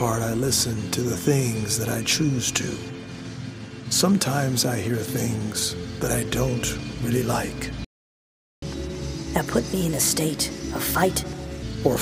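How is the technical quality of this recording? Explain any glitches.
The recording has two linked glitches near the end.

A playback stall runs from 7.85 s to 8.62 s. The sound stops mid-flow and goes silent for about 0.78 s. The player most likely ran out of buffered data or had its thread blocked. Output then resumes.

Catch-up at higher speed follows, from 8.62 s to 11.62 s. The player works off its backlog by resampling at 1.25 times normal speed. The sound is hurried and raised by about four semitones for three seconds. It then drops back to normal pitch and pace.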